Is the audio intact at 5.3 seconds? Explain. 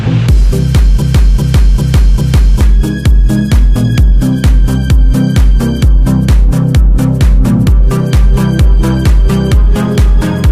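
Yes, at 5.3 seconds the audio is intact, with no dropout, click, distortion or other fault at that moment.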